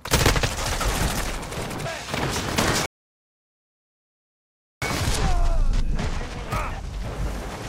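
At 2.86 s the audio stops dead in a rebuffering stall, sitting in silence until 4.82 s, when it picks up exactly where it left off. The player ran out of downloaded data and waited, adding about 1.96 s. Waveform and spectrogram show a flat, empty gap.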